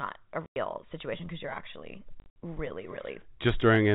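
Packet loss filled with silence cuts in at 0.46–0.56 s, just before "situation because you're actually", and again at 2.2–2.36 s, right after it. The lost audio became dead silence with hard edges. The first gap is a solid 100 ms. The second scatters 100 ms across 160 ms, longest 60 ms, which fits 20 ms packets.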